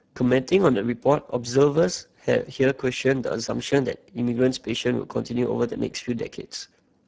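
From start to finish the speech carries Speex codec damage, and it's plainly audible: a hoarse, noisy grain. That sounds like the encoder starving the excitation of bits, which fits a low setting near 10 kbps.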